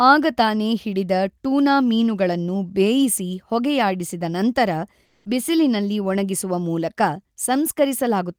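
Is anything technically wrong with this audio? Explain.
Yes. Comfort noise in place of the background from 5.05 to 5.25 s, just after "ಮೀನುಗಳನ್ನು ಬೇಯಿಸಿ ಹೊಗೆಯಾಡಿಸಿದ ನಂತರ": likely discontinuous transmission halted sending in the pause, so the receiver substituted synthetic noise. The background, about 45 dB below the loud passages, turns smooth and featureless for 200 ms, shifting level by about 3 dB.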